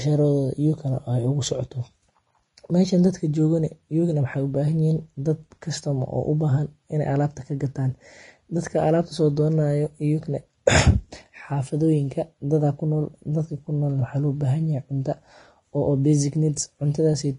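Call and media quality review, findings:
Speech hissy and grainy throughout, nothing above 10.6 kHz; likely Vorbis compression at roughly 30 kbps, treble quantised into noise, blurring attacks. Damage plainly audible.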